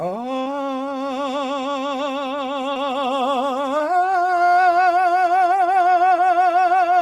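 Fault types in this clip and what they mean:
Short concealed packet loss: at 0.43–0.48, 2.74–2.77 and 3.77–3.81 s, 20 ms of music went missing; the decoder extended the previous sound, causing brief smears.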